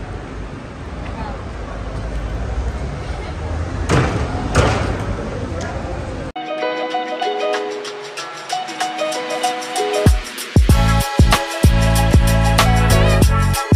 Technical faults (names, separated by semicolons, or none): none